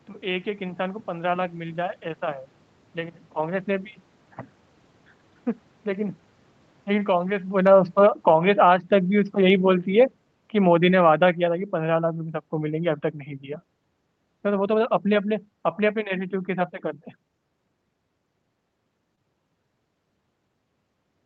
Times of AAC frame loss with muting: none

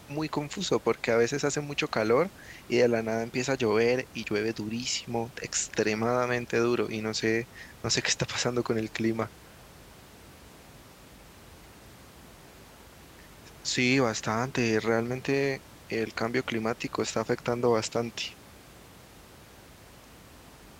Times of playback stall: none

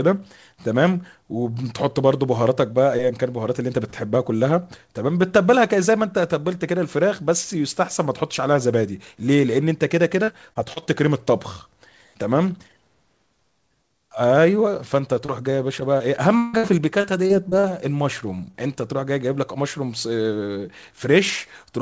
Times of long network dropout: 16.38-16.55

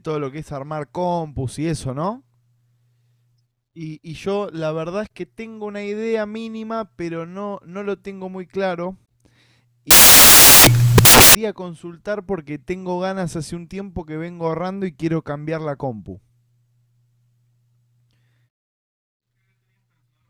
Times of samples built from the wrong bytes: 9.91-11.35

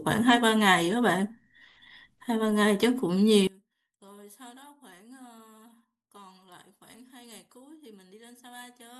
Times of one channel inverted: 3.47-8.99

